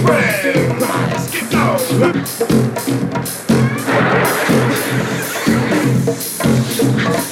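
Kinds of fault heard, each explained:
Nothing stood out as a fault on listening.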